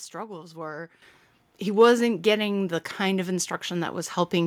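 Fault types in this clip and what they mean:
Microphone volume stepped up: the calling software judged the microphone input too quiet and raised the device's input volume in a single jump instead of ramping it gradually. At 1.02 s, just before "he wasn't getting the", the speech and the background noise behind it both become louder by about 10 dB at once. The shift is abrupt and audible.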